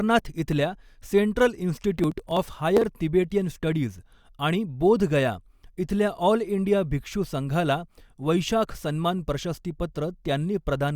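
Processor overload crackle runs from 1.99 to 2.84 s, a burst of gritty tearing laid over the speech for just under a second. The processor fell behind its deadlines for very short audio buffers, each around a millisecond and a half, and missed about twenty of them across that stretch. Each missed buffer was skipped outright, leaving a tiny hard-edged gap, and the rapid run of gaps fuses into crackle that stops once the load eases.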